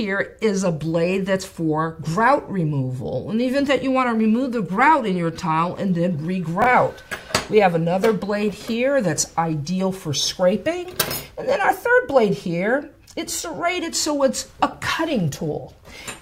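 At 6.62 to 6.66 s, two 20 ms chunks are out of order: one chunk arrived a chunk late and plays after its successor, creating three hard joins heard as a brief jumbled moment. The waveform shows abrupt discontinuities; the spectrogram, thin vertical broadband lines.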